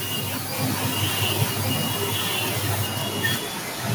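From 0.52 s to the end of the speech, a delayed second copy of the voice trails the original by about 1.12 s. It sits only slightly below the direct speech, roughly 5 dB down, so it competes with it rather than fading into the background. This is an echo leak, likely from a far end playing the call through a loudspeaker, where the echo canceller failed to remove what its microphone picked up and sent it back.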